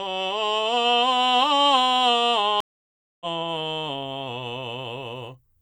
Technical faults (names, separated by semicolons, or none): stream reconnect